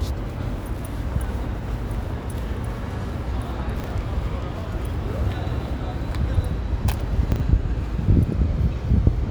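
A brief jumbled stutter occurs at 3.76 to 3.84 s and again at 7.32 to 7.40 s. Both are chunks out of order: one 40 ms chunk arrived a chunk late and played after its successor, so nothing is lost, but the swap leaves three hard joins.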